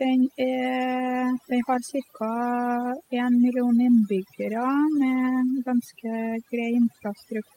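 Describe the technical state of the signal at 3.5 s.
At 3.5 s the speech carries overdone noise removal, present throughout the clip rather than starting or stopping there. Noise reduction set far too aggressively is cutting individual frequency bands whenever they sit near its noise estimate, taking quiet voice components with them. The background drops and breaks up into twinkling specks. That flickering, band-by-band gating is what separates it from a plain low-pass filter or lossy codec dullness.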